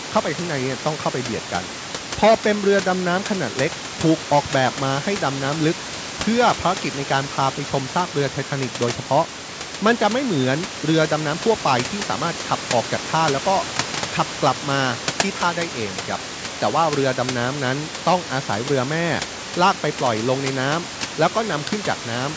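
No technical faults are audible.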